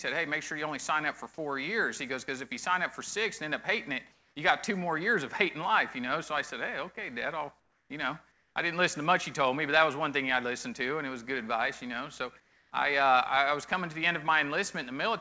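Comfort noise replaces the background at 4.12 to 4.36 s, 7.60 to 7.90 s, 8.32 to 8.56 s and 12.40 to 12.72 s, each time swapping the real ambience for a flat, featureless hiss about 2 to 5 dB quieter, likely from discontinuous transmission. Unlike a gate or dropout, the gap isn't silent, just smoothed. The whole clip stops at 8 kHz, as a G.722 call path would.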